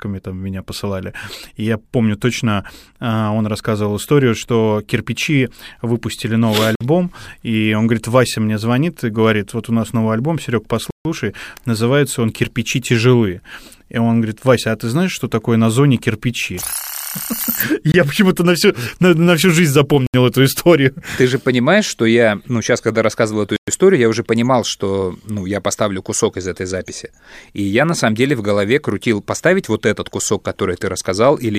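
The speech drops to dead silence five times: 6.75 to 6.81 s (52 ms) after "выпустили новый", 10.91 to 11.05 s (147 ms) before "называется он", 17.92 to 17.94 s (22 ms), 20.07 to 20.14 s (73 ms), and 23.56 to 23.68 s (113 ms) between "сейчас когда рассказывал эту" and "историю я уже понимал". Each is likely a Bluetooth stall, where the headset's buffer emptied while delayed packets were resent. The waveform flatlines abruptly, and the spectrogram shows clean vertical blank bands.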